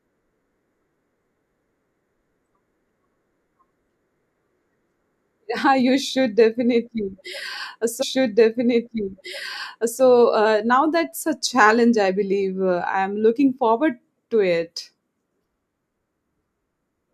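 At 8.01 s a stream segment is repeated: the player queued the same two seconds twice, so audio through 10.01 s replays, with a blip before "uh now that's a".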